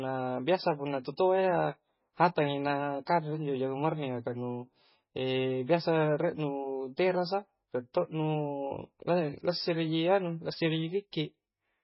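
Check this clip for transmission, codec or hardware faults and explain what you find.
One fault runs through the whole clip. MP3 compression, throughout: the speech has heavy codec damage and nothing above 5.6 kHz, likely from an encoder starved of bits, which fits a rate near 16 kbps. It drops the treble and switches weak frequency lines on and off frame to frame, so the speech sounds dull, watery and swirly, with metallic chirps on s sounds and smeared attacks.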